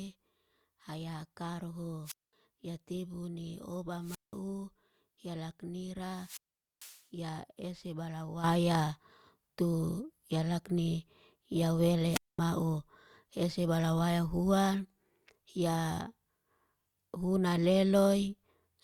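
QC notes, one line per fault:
2.04–2.33 s, 4.00–4.36 s (after "tebu ne"), 6.10–7.04 s (before "ya ese balawaya") and 12.10–12.39 s (after "ya lakni ya"): wireless microphone squelch dropout. The FM link fades, hiss surges, and the receiver's squelch mutes the output for about 0.21, 0.18, 0.45 and 0.22 s. On a spectrogram each shows a broadband noise smear followed by a blank column. On the waveform each is a flat line until speech resumes.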